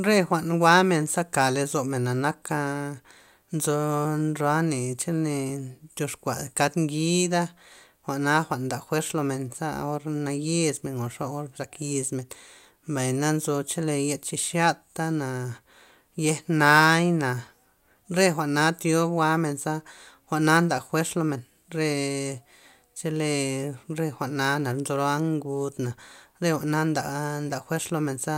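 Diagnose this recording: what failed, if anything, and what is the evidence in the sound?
Nothing failed; no stage leaves evidence of a fault.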